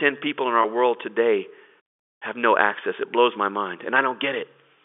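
A speech clip heard through a telephone-band line has a packet loss with pitch repetition between "in our" and "world today", from 0.62 to 0.64 s. The 20 ms gap, which fits a single lost packet, was bridged by repeating the last pitch period. It therefore sounds like a slightly held, buzzy instant, not the silent hole or click of an unconcealed dropout.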